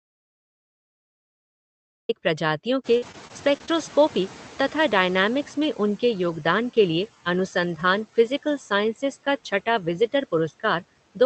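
A speech clip that opens in an audio dropout to silence: from 0 to 2.09 s there is plain silence with no room tone at all, which tells it apart from a quiet pause or a gated mic, and most likely points to the input being lost while the recorder kept writing. Around 3 s the room noise jumps by about 19 dB, and the noise suppressor catching up is audible from 2.84 to 5.82 s: the new noise arrives only partly reduced and then settles by about 8 dB over roughly 3 s. That slow fade-down of a steady background is unlike a level pump from compression, which follows the speech. Over the same stretch, from 2.97 to 3.89 s, repeated packet loss gives a choppy, robotic quality. Five short holes, the longest 43 ms and about 120 ms in total, are each patched by stretching the last sound, covering about 13% of that span. Because the holes are brief and close together, the result is choppy sound rather than one clean gap like the opening dropout. 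Throughout, the sound is band-limited at 8 kHz, which fits an Opus call path at 32 kbps.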